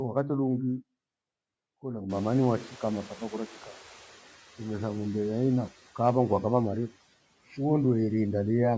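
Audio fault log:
2.09–4.08 s noise suppressor catching up: the room noise jumps about 24 dB near 2 s and passes under-reduced, then sinks about 6 dB over 1.99 s as the noise estimate adapts. It is a single smooth decline, unlike pumping that follows speech.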